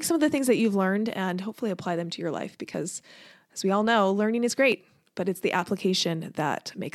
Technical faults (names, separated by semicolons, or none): overlap between stream segments